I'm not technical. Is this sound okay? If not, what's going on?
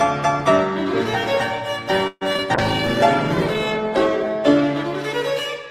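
No. At 2.07 to 2.23 s there's a call audio freeze: the last sound stretches into a fading buzz, then carries on where it stopped. This is likely from delayed delivery, and nothing is lost. At 2.33 to 2.36 s and 2.36 to 2.40 s, short concealed packet loss makes brief smears where tiny bits of sound really are missing and get patched over. From 2.56 to 4.36 s a call bitrate drop makes the sound rough and muffled for nearly two seconds, far longer than those quick glitches.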